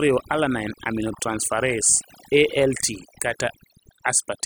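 Overdone noise removal runs through the whole speech clip. The noise reduction was set too aggressively, so individual frequency bands near the estimated noise floor are pulled down or cut entirely. Quieter speech components disappear with them, leaving near-silent gaps with twinkling specks.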